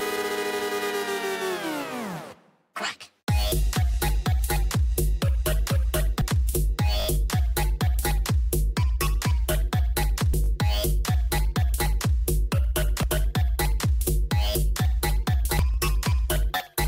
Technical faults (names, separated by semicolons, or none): damaged data in a compressed stream; repeated buffer